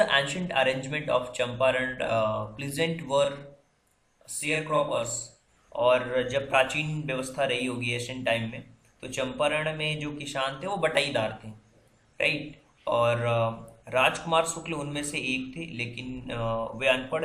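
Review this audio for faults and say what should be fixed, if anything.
Channel delay (doubling) from 3.24 s to 5.48 s: one channel arrives 40 ms behind the other, and when the two are summed to mono, the late copy sounds as a separate slap at equal level, doubling every onset. Keep both channels' buffers aligned, or check inter-channel timing before any mono fold-down.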